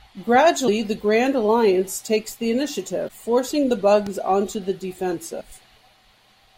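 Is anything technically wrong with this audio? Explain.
Yes. Three short bursts of damaged data in a compressed stream, at 0.64 to 0.69 s, 3.05 to 3.10 s and 5.37 to 5.43 s, each about 45 to 60 ms long. In each, corrupted bytes in the encoded speech leave the decoder unable to parse the frames, so it drops sync and hunts for the next valid frame header. The result is a brief glitch in the speech, a chirp, squawk, click or short hole.

A loud pop lands at 4.07 s and lasts about 20 ms. It is a single sharp transient peaking roughly 5 dB above the surrounding speech, and the speech continues underneath it without interruption. The likely cause is a sudden voltage step or pulse entering the signal path, from a plug being moved, a switch, a static discharge or a driver glitch, which the downstream circuitry shaped into a short, hard click-thump.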